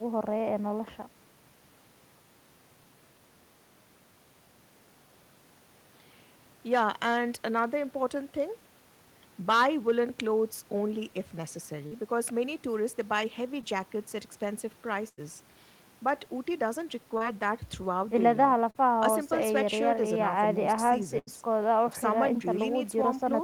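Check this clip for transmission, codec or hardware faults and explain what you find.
The clip has two kinds of network fault, both from packets lost on the way to the receiver.

Short concealed packet loss occurs at 11.87–11.93, 13.61–13.64, 17.17–17.23 and 18.71–18.77 s. Each time, between 20 and 40 ms of audio never arrived in time, and the decoder covered the hole by extending the preceding sound before blending back into the real signal. The result is a quick smear or wobble, and a brief consonant can vanish. Unlike a burst, each patch is too short to fade and blends back smoothly.

Bursts of packet loss occur at 15.08–15.19 and 21.19–21.29 s, with about 100 ms and 80 ms missing. Several consecutive packets were lost, so the concealment had to run long. It holds the last sound as a buzz or hiss that dies away before the audio resumes further on. What separates these from the short losses is that audible decay and the jump forward, which leave a real piece of the speech missing rather than merely blurred.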